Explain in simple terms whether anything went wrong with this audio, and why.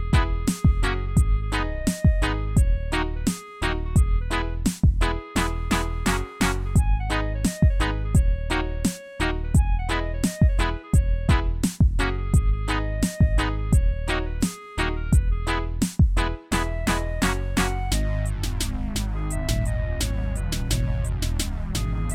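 Nothing went wrong; there are no faults to hear.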